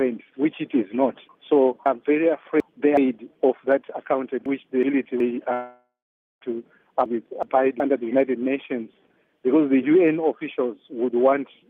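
Chunks out of order, 1.86 to 2.97 s: a block of about 372 ms lands two blocks late, so it plays after the two that should have followed it. The result is a jumbled stretch with hard joins at each of the three points where the sequence breaks. The same fault recurs at 4.46 to 5.20 s and at 7.06 to 7.80 s, each time with a single block displaced by one position. These shorter swaps sound like brief jumbled moments, again with hard joins.

Long network dropout, 5.53 to 6.43 s: about 0.88 s of audio never arrives, likely because the network stream was interrupted. The receiver papers over the gap by stretching the last received sound into a buzzy, hissy tail that fades away, leaving roughly half a second of silence. The audio then resumes further along, with the missing portion simply gone.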